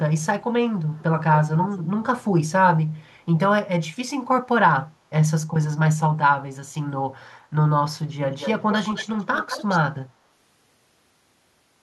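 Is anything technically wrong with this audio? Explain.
Yes. Echo leak at 0.94–1.03, 1.45–1.84, 2.98–3.03, 8.39–8.51 and 8.7–9.79 s. A delayed copy of the speech, ranging from barely audible to fairly clear, trails it by 252 ms early on and by 213 ms later. This is likely a loudspeaker pickup that the echo canceller failed to remove. It is a distinct repeat, not a smeared reverberant tail.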